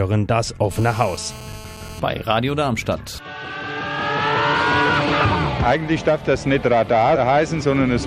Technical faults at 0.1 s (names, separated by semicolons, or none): none